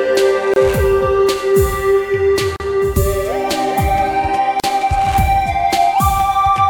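Short silences break the music at 0.54 s, 2.56 s and 4.60 s, about every 2 s. These are gaps at joins of encoded pieces. Each piece kept its encoder delay and end padding. The first gap lasts 25 ms, the others 38 ms. The edges are smeared, and the music resumes where it stopped.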